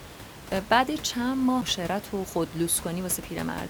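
At 1.61 s the speech breaks with a CD skip: the laser has jumped to a different turn of the disc's spiral, so playback mutes for only a few milliseconds, giving a small tick, then resumes from another point in the recording. Unlike a plain dropout, where the sound returns exactly where it left off, the speech here continues from a displaced position, jumping forward or back by whole disc turns. The room noise, about 15 dB below the speech, is muted along with it during the break.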